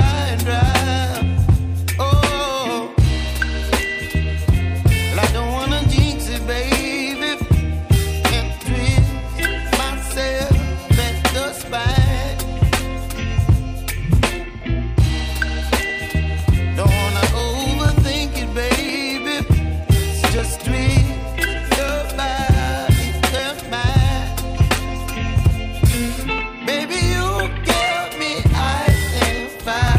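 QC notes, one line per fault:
15.9–29.9 s, periodic USB or driver dropouts: a tick recurs every 0.5 s, about thirty in all, each from roughly a millisecond of audio being skipped outright rather than filled with silence, so the waveform jumps and clicks. A background task stalling the bus or driver at a fixed interval fits this. Unlike random clicks or buffer underruns, the spacing is metronomic, and the ticks vanish whenever there is no signal.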